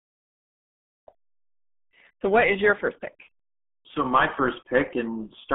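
The speech here has been squeezed through the RealAudio 14.4 codec for its whole length, a low-rate coder built for dial-up links whose heavy compression fits a budget of roughly 8 kbit/s. To fit that budget it keeps only a telephone-like band of about 200 Hz to 3.5 kHz, with nothing above 3.7 kHz, and coarsely models what remains. The result is speech that sounds muffled and thin, with a gargly, bubbling roughness throughout.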